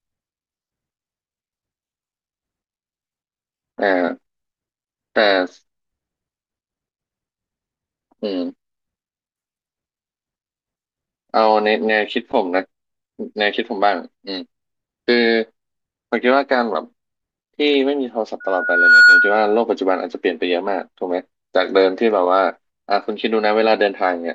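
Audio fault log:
18.4 to 19.62 s: loudspeaker feedback squeal. A single 1.4 kHz tone swells out of the speech over roughly half a second and ends up about 10 dB above it, the mic catching its own loudspeaker so that one frequency keeps feeding itself until the loop breaks.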